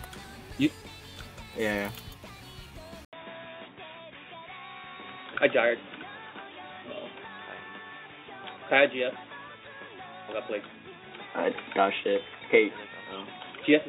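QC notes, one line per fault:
3.05 s to the end, input switched to a poorer device: after an 80 ms gap the sound turns dull and boxy, with nothing above 3.8 kHz and a faint new noise floor at an unchanged level, likely from a lower-bandwidth microphone or headset call profile.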